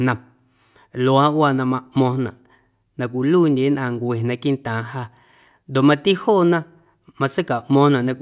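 Speech recording with no audible technical faults present.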